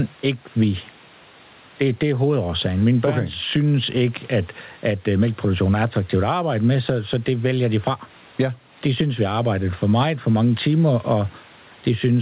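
Gain pumping throughout: gain ducks around 10 dB under loud syllables, likely a fast limiter fighting excess gain; the waveform envelope looks flattened.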